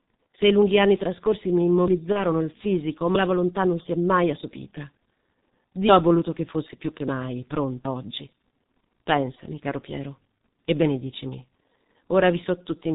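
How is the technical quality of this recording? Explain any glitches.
The technical quality is poor, with heavy codec degradation throughout and one brief dropout.

Throughout, the G.723.1 codec's 30 ms frames and sharp 4 kHz band limit, consistent with about 6.3 kbit/s, make the speech muffled, hoarse and smeared at consonants.

From 2.12 to 2.24 s, VoIP packet loss concealed by the speech codec: a gap that fits one lost 30 ms frame was filled by extrapolation, leaving a stretched, fading sound before recovery.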